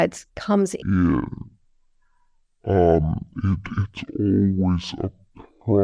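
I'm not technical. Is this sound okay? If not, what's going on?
No. From about 0.82 s to the end, the speech plays at half speed and a full octave lower. That is a wrong sample rate fault, which fits audio recorded at 44.1 kHz being played back at 22 kHz. Unlike a simple slow-down, the pitch drops together with the speed.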